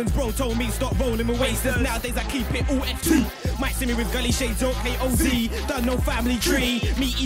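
At 3.18 to 3.20 s there's a loud pop, a single sharp crack sitting roughly ten decibels above the surrounding sound, which keeps running underneath it. A second, near-identical loud pop lands at 5.84 to 5.86 s, again a single hit at about the same level. Each one is likely a brief voltage spike, the kind a switch, a plug or a static discharge throws into the signal path, shaped into a quick crack by the circuitry downstream.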